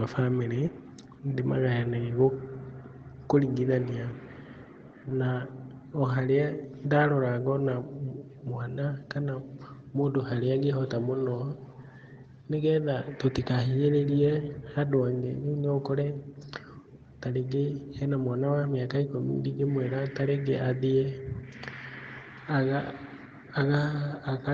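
It's a speech recording that went through an ordinary call path, and nothing in it stands out as a technical fault.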